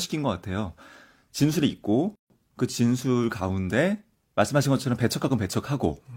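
Speech, where separately encoded pieces were joined without trimming the encoder's start-up delay and end-frame padding. This produces a gap at a join of encoded pieces: a silence of about 147 ms from 2.15 to 2.30 s, with smeared edges, before the sound resumes where it stopped.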